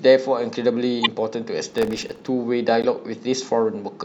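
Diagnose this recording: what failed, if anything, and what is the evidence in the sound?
Corrupt frame decoded, at 1.03 to 1.07 s and again at 2.82 to 2.85 s, is a codec-stage fault. Each event is a short chirp-like blip lasting roughly two frames. The first is loud, peaking near about -5 dBFS, and the second is softer, near about -15 dBFS. Damaged bits in the compressed stream were decoded anyway, so misread gains and codes put energy at frequencies the speech never had, for just the length of those frames.

Processor overload crackle runs from 1.70 to 2.27 s, at the driver and buffer stage. A dense burst of gritty crackle tears across the speech for over half a second and stops abruptly once the load clears. Its fine texture fits very short buffers of around 1.5 ms, with something like forty deadlines missed in that stretch. Each late buffer was replaced by silence, so the audio is repeatedly chopped by tiny hard-edged gaps.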